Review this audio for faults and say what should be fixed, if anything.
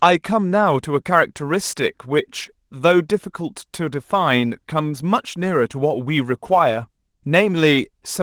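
Sample clock jitter runs from 0.66 s to the end at 8.2 s. The converter's clock wanders by a couple of microseconds, so samples land slightly early or late. A hiss of error rides on the speech, roughly 35 dB below it. The hiss grows on loud, bright sounds and drops away in pauses. The light Opus voice coding is heard as separate from this fault. To prevent it, clock the converter from a clean, stable reference with low-jitter recovery.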